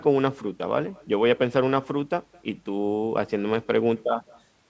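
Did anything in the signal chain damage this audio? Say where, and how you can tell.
Yes. The damage is in the call processing at the far end: the remote side played the call through a loudspeaker, its microphone caught that playback, and no echo canceller removed it before sending it back. Throughout the clip, every phrase is trailed by a faint copy about 28 dB down, arriving roughly a fifth of a second later, thin from its trip through the far room. This is echo with no canceller, heard inside a band that stops at 8 kHz, as a wideband call codec such as G.722 would produce.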